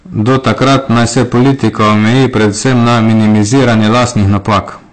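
Hard clipping runs through the whole speech clip: the level sits about 14 dB beyond what the signal path can pass, so roughly a fifth of the samples are sheared flat at the ceiling. Those squared-off peaks spray harmonics upward, giving every loud syllable a harsh, gritty fuzz.

Lossy compression, likely AAC-LC, is also present throughout, and its damage is plainly audible. Nothing reaches above 8.6 kHz, and the coarse quantising leaves the speech dull and smeared, with a fizzy, warbling edge on sibilants, which fits a bitrate around 32 kbps.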